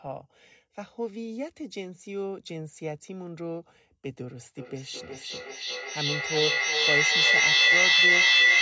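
From 4.58 s to the end, feedback echo between two devices: the sound returns roughly every 0.4 s and builds to about 12 dB above the speech instead of dying away like a single delayed echo.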